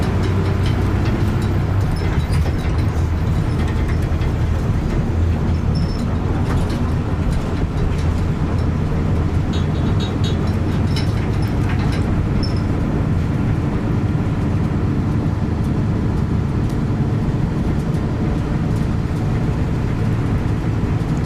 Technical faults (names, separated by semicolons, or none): electrical switching spike